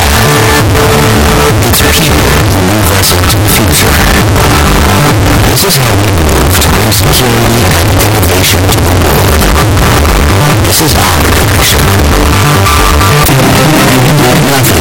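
From start to end the audio is buried in harsh, very loud distortion, and quiet stretches blast as hard as the loudest ones. That points to signed and unsigned samples mixed up, likely in reading 16-bit data: with the top bit flipped, every pass through zero jumps across the full range. Plain clipping only flattens peaks, and a byte-order swap sounds like hissy noise, not a constant roar.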